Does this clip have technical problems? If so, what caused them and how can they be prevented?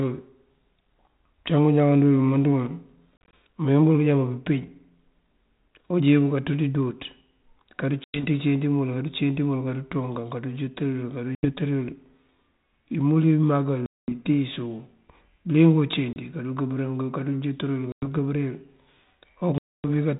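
Yes. Packet loss on an ADPCM call cuts silent holes into the speech at 3.18, 8.04, 11.35, 13.86, 16.13, 17.92 and 19.58 s, from 30 to 260 ms long. The longest holes are at 13.86 and 19.58 s. After each gap the decoder's predictor and step size no longer match the sender's, so the speech comes back slightly distorted before it settles. In the waveform these show as flat silent stretches with abrupt edges. In the spectrogram they are blank vertical bands.

Prevention: carry this 32 kbit/s G.726 link over a network with jitter buffering and redundancy or forward error correction, and have the decoder conceal lost packets and resynchronise its state.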